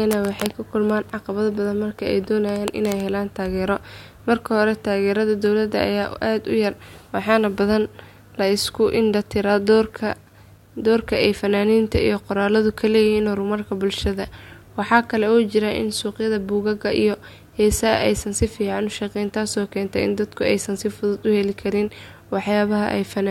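A speech recording with grainy, signal-following distortion throughout, worst on quiet tails, likely low bit depth without dither, fitting roughly 10-bit rounding with error about 45 dB down.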